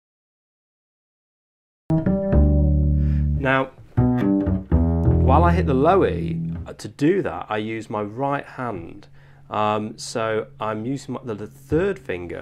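The clip opens with a cut-off start: from 0.0 s to about 1.90 s there is only silence, and at 1.90 s the sound appears abruptly in the middle of an event, with no natural attack or fade-in leading into it. This is what happens when a recording or stream begins late. Capture or playback only started partway through the sound, so its true onset is missing and the first audible moment is a hard entry rather than a beginning.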